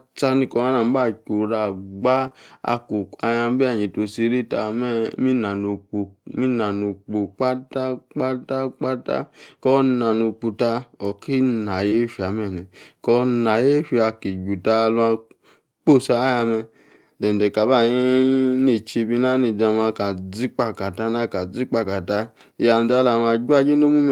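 A brief smear and wobble at 2.27 to 2.33 s marks a short concealed packet loss. About 40 ms of speech never arrived in time, so the decoder stretched the preceding sound to cover the gap. Its last 20 ms, 2.31 to 2.33 s, sounds rougher because it is a lost packet rebuilt from error correction, a low-bitrate copy carried in the following packet.

The same pattern recurs at 11.88 to 11.94 s: a smeared, wavering patch from concealment, ending in a grainier 20 ms stretch at 11.92 to 11.94 s rebuilt from the error-correction copy.

Three more single packets were lost and rebuilt from error correction. Each is a 20 ms moment of rougher, noisier sound, at 16.40, 21.84 and 22.92 s. There is no gap at these points because the decoder played the low-bitrate backup copy in place of the missing packet.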